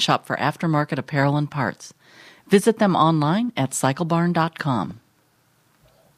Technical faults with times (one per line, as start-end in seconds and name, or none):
4.91-5.00 DAB burbling